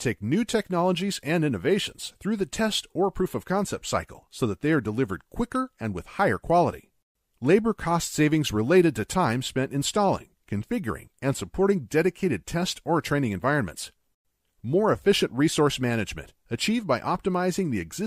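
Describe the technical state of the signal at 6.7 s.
At 6.7 s the signal is intact, with no dropout, clipping, glitch or other technical fault audible at that point.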